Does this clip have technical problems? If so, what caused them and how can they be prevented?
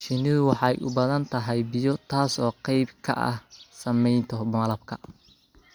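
No, no technical faults here.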